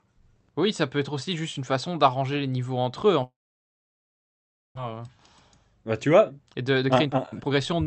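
Right after "niveaux entre eux en", at 3.23 s, the speech breaks off in what sounds like a long network dropout, which likely means packets stopped arriving. The last sound is stretched into a brief fading buzz, and then there is near-silence until 4.79 s. About a second of speech never returns. On a waveform this appears as a short decaying tail followed by a flat, almost empty stretch. On a spectrogram it shows as a smeared band that dies into a dark gap.

After "tu vois", from 6.30 s to 7.85 s, a jitter buffer speed-up takes hold. The receiver trims pitch-period-sized slivers again and again to shed about 0.4 s of audio, so the talker suddenly sounds hurried, running at about 126% of normal speed with unchanged pitch. A spectrogram shows harmonics at their usual spacing but syllables packed closer together. The waveform looks compressed in time. Throughout, the Opus call path limits the spectrum to about 8 kHz.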